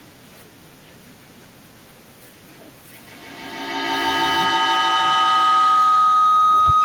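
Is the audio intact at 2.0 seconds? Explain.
Yes, the speech at 2.0 seconds is intact, with no dropout, click, distortion or other fault at that point.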